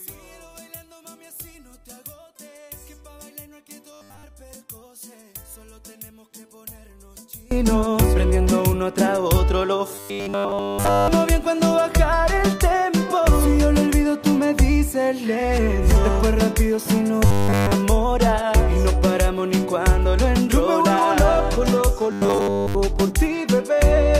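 One channel inverted, from 0.0 to 7.51 s: when this stretch of audio is summed to mono, it drops by about 24 dB and leaves only a faint residue. That points to one stereo channel likely having reversed polarity. Everything common to left and right cancels, so only the small difference between the channels survives. From 7.51 s onward the mono level returns.

Robotic sound from repeated short buffers, at 3.93 to 4.23 s, 9.95 to 11.08 s, 17.26 to 17.72 s and 22.12 to 22.75 s: in each burst the sound turns into a rigid, metallic 100 Hz buzz. The buzz still loosely follows the contour of the audio underneath. The likely cause is that new audio stopped arriving in time and essentially all of each burst was filled by looping the last 10 ms segment. That repetition period sets the fixed 100 Hz pitch, and the real audio in those gaps is skipped.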